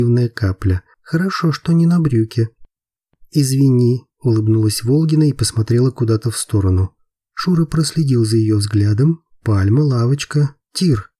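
No technical faults can be heard at any point in the audio.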